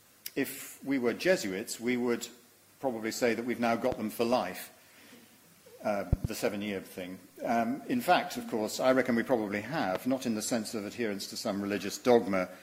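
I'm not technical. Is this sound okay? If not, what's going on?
No. A sudden electrical jolt, likely from a plug, switch or static, causes loud pops at 3.92–3.95 s, a double one at 6.13–6.27 s, and 9.95–9.98 s.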